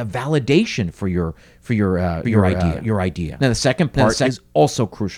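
From 2.25 to 4.31 s, after "your for your uh", a doubled audio track appears: an equally loud copy trails about half a second behind, likely from a second, slower capture path, showing as duplicated, offset waveform bursts that start and stop abruptly.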